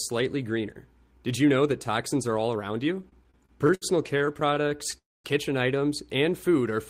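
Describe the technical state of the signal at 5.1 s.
At 5.1 s the sound stalls: from 4.98 to 5.27 s the last fragment smears into a brief fading buzz, then roughly a quarter second of near silence. It is a call audio freeze, likely from delayed packets draining the jitter buffer; playback then resumes where it stopped, nothing lost, running about 265 ms later.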